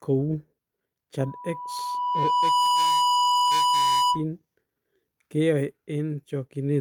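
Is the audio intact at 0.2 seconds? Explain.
Yes, the speech plays cleanly through 0.2 seconds, with no dropout, click, distortion or other fault at that moment.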